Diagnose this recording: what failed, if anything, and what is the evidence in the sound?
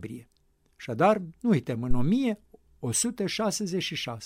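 A phantom power thump sits at the analogue input stage. It runs from 1.91 to 2.11 s, just after "nu uităm", as a low thump that dies away in about 47 ms. A supply was switched on a live input, and the voltage step passed through the coupling capacitors.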